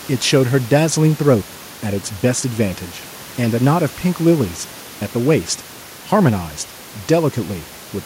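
No technical faults can be heard anywhere in the speech. The only background is the room's own noise, sitting about 23 dB below the speech.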